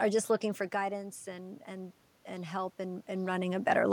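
Automatic gain rising runs from 0.76 to 3.63 s. The input level drops by about 9 dB, soon after the talker moves back from the microphone. The gain control slowly adds about 5 dB, so the speech and the room noise swell up together.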